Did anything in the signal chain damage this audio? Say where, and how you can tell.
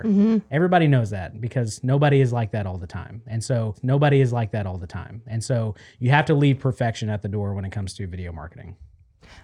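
Yes. The damage sits at the playback stage, where the stream is fetched and queued. A stream segment is repeated: at about 3.74 s the speech jumps back and a stretch plays again through 5.74 s, adding 2 s to the programme. A small blip marks the jump, and the repeated speech is identical to what came before it. That fits the player queuing the same segment twice rather than anything upstream in capture or encoding.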